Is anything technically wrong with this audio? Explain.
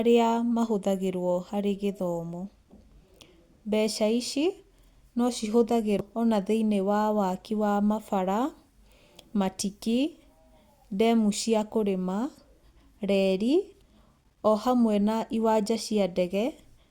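Yes, there's one glitch. At about 5.99 s you get damaged data in the compressed stream: a corrupted stretch makes the decoder lose sync and hunt for the next valid frame, so the speech gives a brief glitch.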